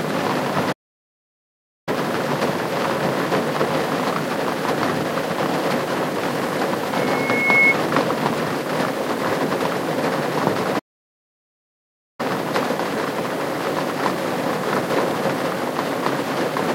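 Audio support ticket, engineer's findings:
Playback stall, 0.72 to 1.89 s. Sound cuts dead mid-flow for about 1.15 s, then resumes. Likely player buffer underrun or blocked audio thread. Not a dropout: gap too long and clean.

Playback stall, 10.79 to 12.20 s. Same symptom, about 1.4 s of silence before output returns. Likely output buffer starved or thread held off. Unlike a mute or gate, nothing fades. Output simply halts and picks up again.

Loudspeaker feedback squeal, 6.92 to 7.76 s. Single tone at 2.2 kHz swelling over roughly 0.7 s to about 10 dB above the programme sound. Mic picking up its own speaker, loop gain above unity at that frequency. Distinct from a test tone or whine: pitch is fixed and level self-builds rather than starting at full strength.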